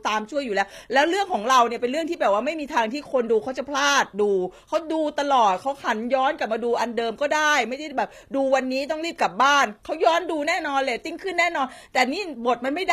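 Speech, with HE-AAC compression audible the whole way through: the treble is rebuilt from copied lower bands, so the s sounds come out gritty and lispy, nothing sits above 14.9 kHz, and the damage fits a low bitrate of around 24 kbps, likely that codec.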